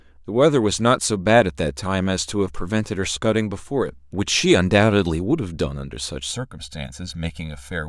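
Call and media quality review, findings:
Channel delay (comb filtering), 6.31 s to end. Speech turns hollow, phasey. Probable component: stereo-to-mono downmix. One channel lags roughly 1.5 ms. Summing cancels shared content at evenly spaced notches, first near 400 Hz.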